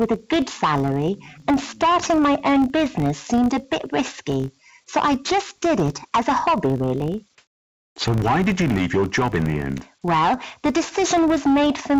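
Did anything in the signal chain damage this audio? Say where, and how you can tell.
Yes. A steady 50 Hz buzz runs through the whole clip, made of small ticks that grow louder and softer with the sound. This is a filter restarted on every block in the processing or buffer stage. Each block begins from a zeroed state, and the 50 Hz rate fits 20 ms blocks.

From 7.38 to 7.96 s, about 580 ms, the quiet background sits about 53 dB below the loud parts. It turns into smooth, featureless hiss with a level shift of about 4 dB. This is comfort noise in place of the background, likely inserted by the call path's discontinuous transmission while the real background was not being sent.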